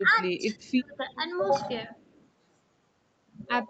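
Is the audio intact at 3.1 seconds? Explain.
Yes, the speech at 3.1 seconds is intact, with no dropout, click, distortion or other fault at that moment.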